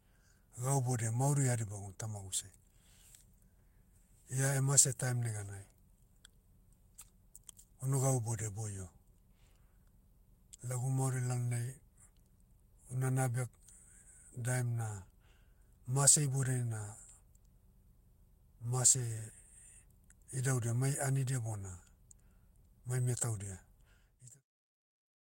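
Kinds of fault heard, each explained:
Nothing stood out on listening to this speech clip, and the gentle fade-out just before the end is an ordinary edit, not a problem.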